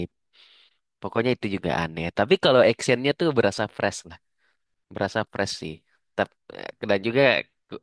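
No technical faults can be heard anywhere in the speech recording. Nothing in it calls for a timestamp or an explanation.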